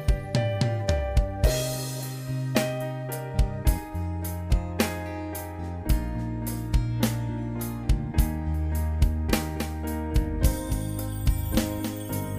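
From 8.54 s to the end, the sound gains a second, weaker copy of itself trailing around 300 ms behind, about 10 dB quieter than the original. It switches on abruptly rather than building up, and it carries the full frequency range with no decay or room colour. This is a doubled audio track, likely caused by the signal being captured a second time through a slower path, or by an edit that leaves two copies out of step.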